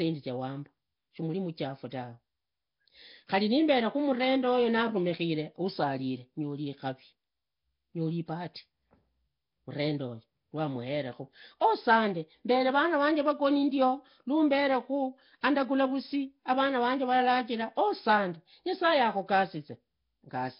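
Throughout, the speech has a rough, hissy halo and underwater smearing with nothing above 5.3 kHz, likely heavy Nellymoser compression, fitting a bitrate near 22 kbps.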